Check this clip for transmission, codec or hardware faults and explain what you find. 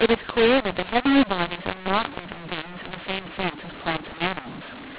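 The clip has one decoding fault that runs through the entire speech recording. Mu-law and A-law mixed up, throughout: the telephone audio was coded with G.711 mu-law but decoded as A-law, so each 8-bit code maps to the wrong level. Loudness is scrambled, the speech sounds harsh and distorted, and pauses fill with noise, all within the 4 kHz telephone band.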